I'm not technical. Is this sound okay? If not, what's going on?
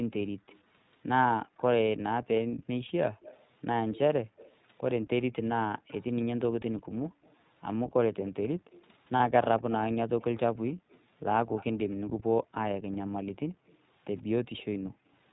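No. The whole recording passes through the iLBC codec, a low-bandwidth internet-calling format. It removes everything above 4 kHz, so the speech sounds muffled and slightly rough and synthetic. The coding damage is plainly audible from start to finish.

There is also an echo leak: a faint copy of the speech trailing about an eighth of a second behind it. From 0.51 to 1.61 s it is very quiet. From 3.21 to 14.63 s it is clearly more noticeable. This is likely a loudspeaker at the other end whose echo canceller let some of the sound back into its microphone.

Two short dropouts are lost iLBC frames, where data went missing and the decoder filled the gap by repeating the last bit of sound. The first runs from 2.88 to 2.91 s and lasts 20 ms. The second runs from 9.16 to 9.21 s and lasts 40 ms. Each is a brief buzzy hold, and the speech recovers immediately after.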